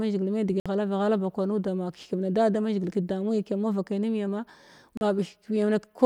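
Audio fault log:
0.60 s and 4.97 s, Bluetooth dropout: the speech cuts to silence for about 56 ms at 0.60 s and about 37 ms at 4.97 s. When the sound returns, it has moved on, as though it kept playing through the hole. This likely comes from audio packets reaching the headphones too late and being discarded. The gap lengths fit roughly three lost packets in the first case and two in the second.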